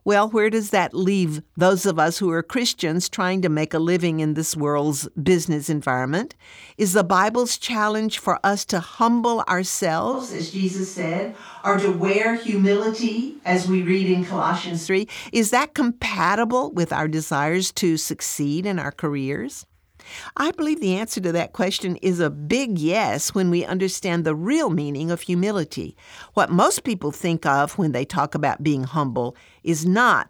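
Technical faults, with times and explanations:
10.15 to 14.87 s, switch to a distant microphone: the speech abruptly turns roomy and hollow, loses bass, and carries more background room noise, sitting about 35 dB below the speech, while its overall loudness barely changes. At 14.87 s it snaps back just as suddenly. This likely happened because the close microphone dropped out, leaving only a microphone farther from the talker, which picks up more room reflections and ambience and less low-frequency body.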